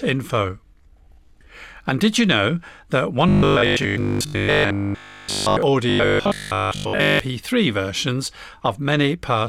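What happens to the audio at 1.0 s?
Nothing goes wrong at 1.0 s; the speech there plays through intact, with no dropout, click, distortion or other fault.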